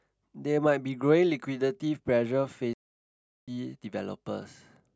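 At 2.73 s the speech stops dead in mid-flow. Silence follows for about 0.74 s, until 3.48 s, when the sound returns. This is a playback stall. The output simply went quiet. The cause is likely that the player ran short of buffered data, or that its audio thread was held up, so nothing reached the output until it recovered.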